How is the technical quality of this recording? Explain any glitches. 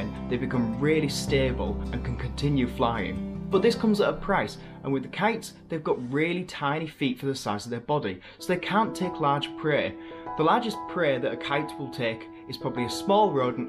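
No glitches or faults are audible.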